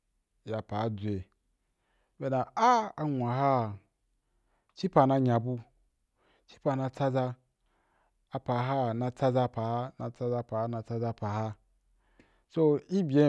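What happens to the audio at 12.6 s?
Nothing goes wrong at 12.6 s; the speech there plays through intact, with no dropout, click, distortion or other fault.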